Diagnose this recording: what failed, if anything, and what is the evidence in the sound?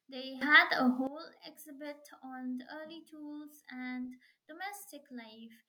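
There's a sudden gain jump at 0.41 s. The speech and background noise leap up together by about 15 dB with no ramp, then drop back at 1.07 s. That's likely a digital gain change in the call processing, applied instantly between samples.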